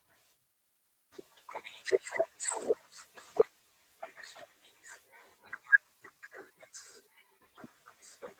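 At 3.39 s the speech makes a skip ahead: roughly 0.7 s of audio was dropped while later audio waited, and the two sides join directly with no gap. From 5.84 to 7.39 s a jitter buffer speed-up trims pitch periods repeatedly to shed excess delay, running about 9% fast at unchanged pitch, sounding hurried, with roughly 150 ms removed.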